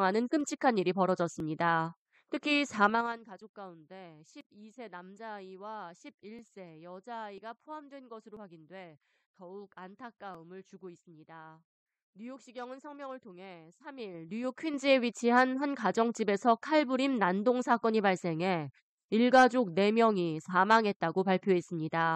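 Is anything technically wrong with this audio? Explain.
Yes. There are two faults. Overlap between stream segments causes tiny skips at 0.41, 1.40, 4.41, 6.39, 7.38, 8.37 and 10.35 s. Overlapping one-second segments get trimmed, cutting 5 to 19 ms of speech. These are isolated skips on a one-second grid, not ticking during level moves.

Zipper noise occurs from 2.87 to 3.23 s, a drop of about 20 dB at about 20 steps per second, and from 13.92 to 14.88 s, a rise of about 20 dB at about 7 steps per second. The gain moves in unsmoothed 3 dB steps, so each step clicks. These level moves tick audibly.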